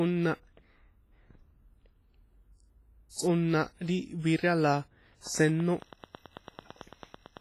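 A low-bitrate transform codec, likely WMA, has left heavy damage across the whole of this speech clip. Its long blocks smear quantisation noise over tens of milliseconds, and weak spectral lines are zeroed, which fits an encode at around 24 kbps. The result is a ringing, washy quality, with hiss that swells and fades along with the speech. Nothing remains above 15.4 kHz, so the top end is cut off cleanly.

From 5.27 s to 7.38 s a train of clicks runs over the sound. Something is injecting a repeated pulse, likely interference from nearby equipment or a faulty connection or power supply. The clicks share much the same shape and arrive at a regular pace of about 9 per second, around twenty in all. They stand roughly 5 dB above the speech and are heard as a steady ticking that continues into the pauses until the clip ends.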